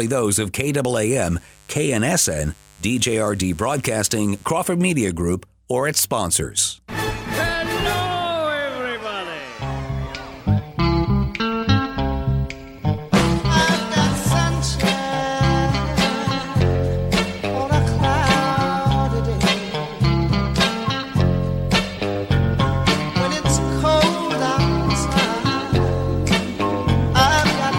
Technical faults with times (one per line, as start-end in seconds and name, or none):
0.93-4.48 mains buzz